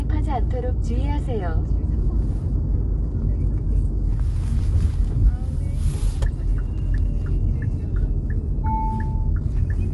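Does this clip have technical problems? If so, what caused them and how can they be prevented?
Yes. Throughout the recording the everyday sounds come across rough and grainy, and nothing is heard above 11.5 kHz. This is likely low-delay AAC compression, consistent with AAC-ELD at about 32 kbps, whose short frames spread coding noise and trim the top band. To prevent it, record locally or raise the bitrate, or use a longer-frame codec when low latency isn't needed.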